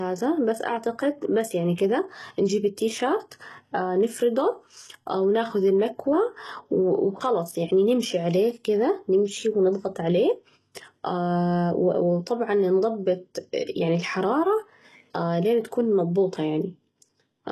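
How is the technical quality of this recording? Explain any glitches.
The recording is compromised by HE-AAC compression across the whole speech clip. The codec likely kept only the lower spectrum and rebuilt the treble by copying lower bands upward, which fits a low bitrate around 16 kbps. The s sounds turn gritty and lispy, with nothing above 12.3 kHz.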